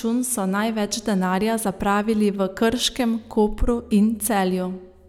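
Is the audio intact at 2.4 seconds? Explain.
Yes, at 2.4 seconds the speech plays through cleanly, with no dropout, click, distortion or other fault to be heard.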